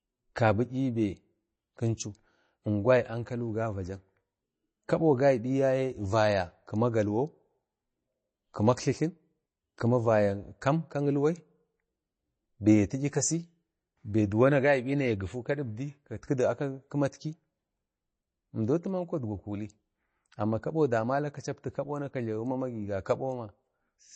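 From start to end, the speech carries plainly audible damage of the kind MP3 compression leaves. Nothing sounds above about 8.3 kHz. The treble stops at a hard edge. Weak detail flickers in and out between frames. That gives a watery, swirling texture with metallic chirps on sibilants. Sharp onsets smear. This is likely an MP3 encoder starved of bits, which fits a low bitrate near 32 kbps.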